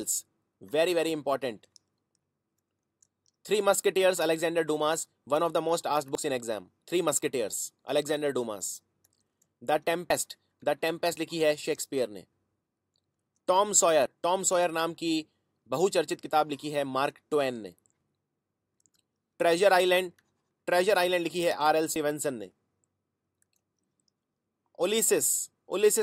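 At 6.15, 10.10, 14.06 and 21.96 s, about 50 ms drops out and the sound jumps ahead. This is audio missing between chunks, likely lost at 4-second handovers.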